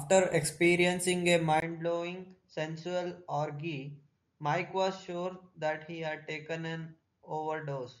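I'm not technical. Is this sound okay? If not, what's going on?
No. At 1.60 s, after a tiny gap, the speech abruptly turns duller and quieter with new background noise. The input likely switched to a poorer device; this is more than simple muffling.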